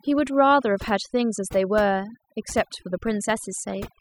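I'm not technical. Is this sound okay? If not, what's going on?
No. Throughout the speech there is overdone noise removal: a clean-up tool set too hard turned the background noise far down along with quiet parts of the voice. Unlike plain muffling, the gaps leave near silence with twinkling specks.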